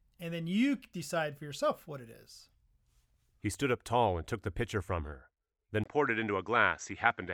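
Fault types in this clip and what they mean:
Input switched to a poorer device: right after "pitcher from her then", around 5.84 s, there's a brief 20 ms gap and then the speech suddenly sounds duller and boxier through to the end. Nothing comes through above about 7.8 kHz, a faint new background noise sits well under the voice, and the loudness barely changes. That sudden shift in tone and bandwidth is most likely the recording jumping to a different, lower-quality microphone mid-take.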